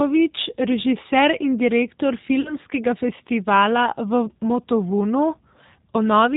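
Speech carried throughout by the G.729 codec, which points to an 8 kbit/s stream. Nothing above 4 kHz survives, and the voice has a plainly rough, synthetic edge from being rebuilt out of a filter, a pitch predictor and a few pulses per frame. That model-based roughness sets it apart from the swirly, watery artefacts of transform codecs. From 2.41 to 2.55 s, just after "režiser in direktor", there is VoIP packet loss concealed by the speech codec. About 40 ms of audio, which fits two lost packets, is replaced by a stretched extrapolation that fades, and the voice stays weakened briefly afterwards. That smeared sound and slow recovery distinguish it from a clean dropout or click.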